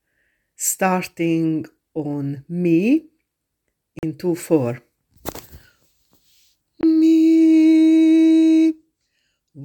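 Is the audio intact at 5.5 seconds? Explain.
Yes, the audio is intact at 5.5 seconds, with no dropout, click, distortion or other fault at that point.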